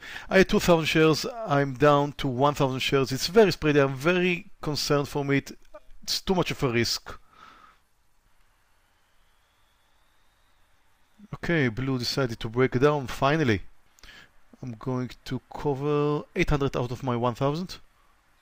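No dropouts, clicks, level jumps or timing glitches turn up anywhere in the recording.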